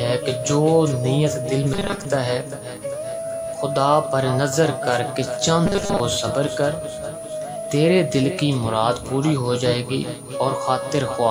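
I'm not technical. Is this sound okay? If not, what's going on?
No. Two problems can be heard.

The first is a switching supply whistle. A power supply in the recording chain is switching on and off at a rate people can hear, and that leaks into the audio. It comes through as a faint, very high whistle around 10 kHz, drifting a little between about 9.3 and 10 kHz. It runs for the whole clip, quietly, behind everything else.

The second is robotic sound from repeated short buffers, at 1.74 to 2.05 s and again at 5.66 to 6.01 s. The likely cause is new audio arriving too late, so the player keeps repeating a tiny slice of about 5 ms while most of the real sound in those moments is skipped. That repetition forces a steady 200 Hz buzz onto the audio, making it sound rigid and metallic while it still roughly follows the original.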